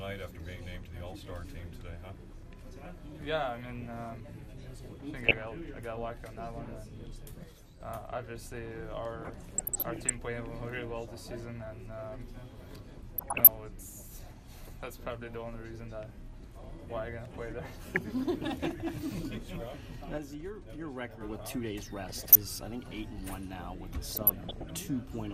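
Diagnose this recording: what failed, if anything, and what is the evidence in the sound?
At the codec stage, the whole recording sounds dull and grainy, with a gurgling texture as upper frequencies flicker in and out. This likely comes from MP2 compression at around 80 kbps. With too few bits, the upper sub-bands are switched off and the remaining bands are coarsely quantised.

DAB burbling appears at 5.17–5.48 s, 9.19–10.13 s, 13.18–13.47 s, 17.83–18.01 s, 22.04–22.36 s and 24.04–24.72 s as short blips of noise over the sound. This points to the reception and transmission stage. At weak reception, a fraction of a percent of bit errors slips past error correction and corrupts samples and scale factors. Single sub-bands then jump in level for up to a frame.

One channel drops out at 7.44–7.80 s and 20.18–21.21 s. Material common to both sides falls abruptly by about 6 dB. The likely cause is one stereo channel being lost ahead of the mono sum, so the sum carries only half its usual signal.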